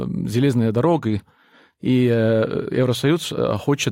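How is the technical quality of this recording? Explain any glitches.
The speech quality drops for a stretch. From 0.95 s to 2.95 s the quality suddenly drops, with codec artefacts rising, then snaps back without any gap. This is an adaptive stream switching to a lower bitrate for two seconds when the connection slowed, then recovering. The character of the change fits a step down from roughly 96 kbit/s AAC to a 32 kbit/s HE-AAC version.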